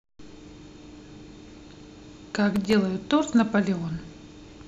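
From 2.56 to 2.73 s the speech carries a brief burst of processor overload crackle. The system fell behind and missed a run of very short buffer deadlines, a handful of them, each under a millisecond, and every missed buffer came out as silence. The hard-edged dropouts sound like gritty tearing over the speech. A waveform shows tiny flat gaps with abrupt edges. A spectrogram shows thin vertical broadband streaks clustered in that window.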